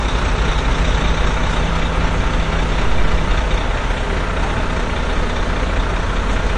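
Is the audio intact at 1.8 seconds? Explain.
No, 1.8 s falls inside AAC compression that runs through the whole clip. Nothing sounds above 9.6 kHz, and the smeared, warbling damage to this sound likely comes from a low bitrate near 32 kbps. A simple low-pass filter would dull it without that warble.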